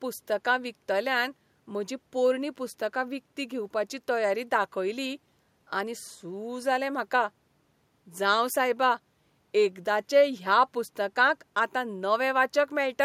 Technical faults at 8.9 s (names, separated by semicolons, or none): none